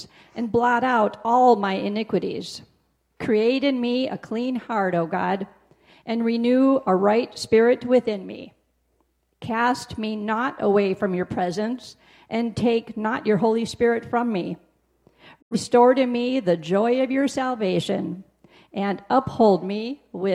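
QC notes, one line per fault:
15.40–15.56 s, digital broadcast dropout: the sound fades out over about 20 ms and goes silent, consistent with two corrupted frames muted by the receiver.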